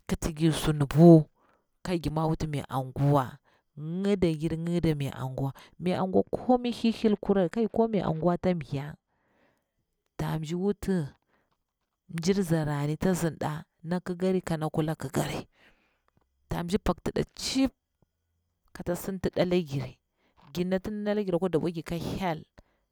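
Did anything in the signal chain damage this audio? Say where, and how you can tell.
Yes. From 5.98 to 9.28 s the speech turns dull and muffled, with the top end rolling off smoothly to about 11 dB down at 10 kHz relative to 1 kHz. That is de-emphasis applied wrongly: a filter stage cut treble to undo pre-emphasis that was either never there or had already been undone.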